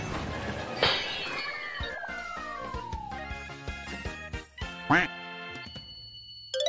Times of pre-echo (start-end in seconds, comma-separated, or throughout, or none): none